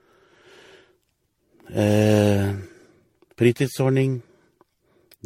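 From start to finish the speech sounds swirly and hollow, with a smeared, watery texture and soft, blurred consonant attacks, more degraded than a single encode at this quality would leave it; nothing is heard above 16.5 kHz. This is generation loss, likely from the audio being decoded and re-encoded around ten times with MP3 at settings that fit roughly 64 kbit/s. Each pass quantised on a shifted frame grid, stacking noise and spectral holes.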